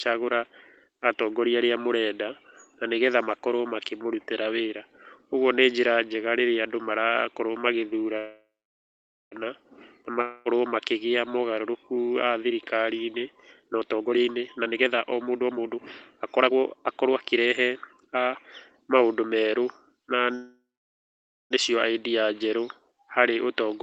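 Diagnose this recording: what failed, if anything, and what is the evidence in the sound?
Call audio freeze, at the network and jitter buffer stage. From 8.17 to 9.34 s, and again from 20.35 to 21.53 s, the last sound drags on as a fading buzz. Then it goes silent for about 0.85 s and 0.89 s. The speech resumes where it stopped, with nothing missing. Each freeze adds roughly 1.15 s of delay. The jitter buffer ran dry, likely because packets were held up in transit.

Long network dropout, also a network fault. Between 10.21 and 10.48 s the preceding sound is stretched into a decaying buzz for 0.24 s. It never falls to full silence. When speech returns, that quarter second of audio is gone for good. Those packets were likely lost.

Jitter buffer speed-up, at the receiver's buffer. From 13.64 to 18.26 s the speech runs at 123% of normal speed, hurried but at unchanged pitch. Roughly a second is trimmed away. 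A milder burst at 112% follows from 18.91 to 19.45 s, trimming about 70 ms. The buffer is cutting pitch-period slices to shed the excess delay it was holding.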